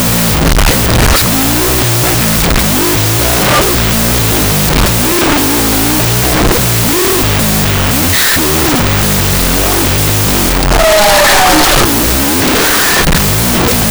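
From start to finish the speech sits buried under loud, harsh noise, slowed to half speed and pitched down an octave. This is a wrong sample width fault: the 16-bit samples were read back as unsigned 8-bit values, so each original sample became two, halving the playback rate. Half of those bytes are low-order fragments that turn into noise, while only the high bytes carry a rough trace of the real signal.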